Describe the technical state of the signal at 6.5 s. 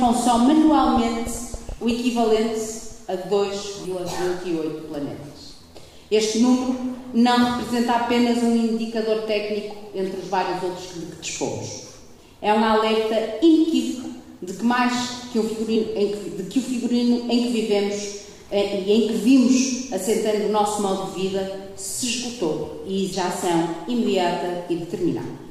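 Nothing at 6.5 s points to a technical fault: the signal runs through that moment intact, with no dropout, click, distortion or other defect to be heard.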